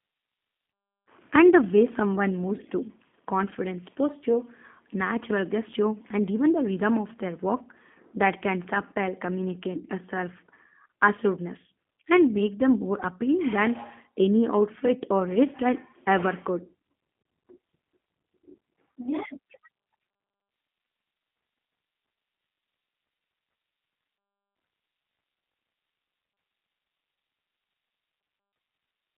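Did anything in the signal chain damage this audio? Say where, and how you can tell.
Yes, at the codec stage: the speech bears the marks of the G.729 codec from start to finish. Everything sits in a telephone band of roughly 200 Hz to 3.5 kHz, with nothing above 3.7 kHz, and the voice has a rough, slightly synthetic buzz, which fits an 8 kbit/s G.729A coder rebuilding each frame from a vocal tract filter, a pitch predictor and a few pulses. A plain band-limiting filter would only sound muffled; this roughness comes from the coarse excitation model.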